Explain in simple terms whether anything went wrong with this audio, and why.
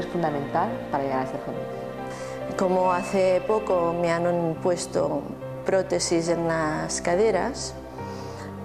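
Nothing went wrong here.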